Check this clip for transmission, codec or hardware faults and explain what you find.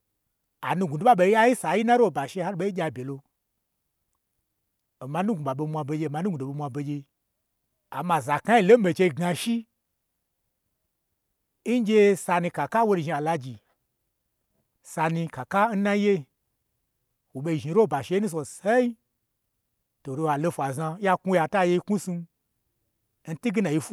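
Listening through the speech turns up no transmission, codec or hardware faults, and the signal holds steady with nothing that points to a problem in the chain.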